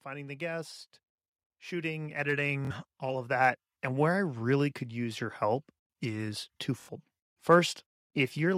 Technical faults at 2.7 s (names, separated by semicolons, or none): automatic gain rising; Bluetooth stutter